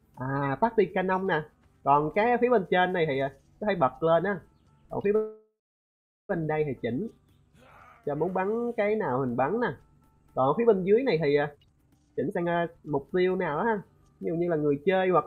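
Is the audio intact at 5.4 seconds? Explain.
No. A call audio freeze runs from 5.15 to 6.31 s. Delayed packets likely emptied the jitter buffer. A fading buzz gives way to silence. The sound then resumes about 1.14 s late, with nothing missing.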